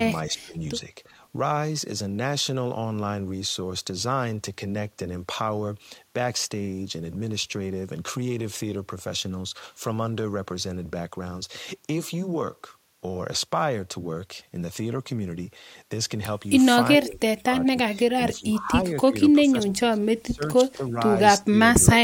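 Speech that dips or chops out in pieces at 0.27–0.59 s, 1.07–1.21 s, 16.99–17.97 s, 18.14–18.73 s, 19.08–19.14 s, 19.33–20.96 s, 21.4–21.56 s and 21.78–22.01 s, sinking by as much as about 30 dB near 19.3–21 s. This is likely speech suppressed in double talk: an echo canceller mistook the talker for loudspeaker echo and attenuated it.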